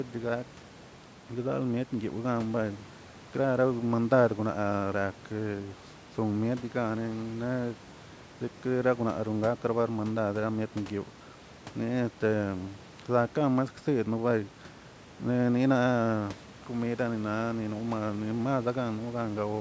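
No technical faults are present.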